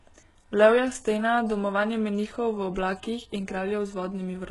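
A short speech clip with heavy HE-AAC compression damage running the whole way through. Everything stops dead around 11.5 kHz, and the treble below that sounds pasted on rather than real: the sibilants come out gritty and a bit lispy, with a metallic sheen. That's likely spectral band replication at work, copying the lower bands upward to fake the top end, and the heaviness of it points to a very low bitrate, something like 12 kbps.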